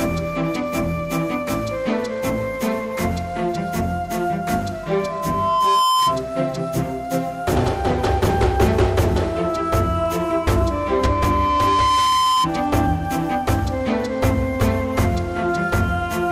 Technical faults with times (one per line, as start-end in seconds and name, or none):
4.83-6.23 loudspeaker feedback squeal
9.98-12.49 loudspeaker feedback squeal